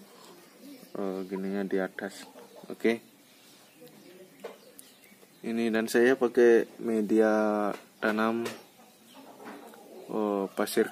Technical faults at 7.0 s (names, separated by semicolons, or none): none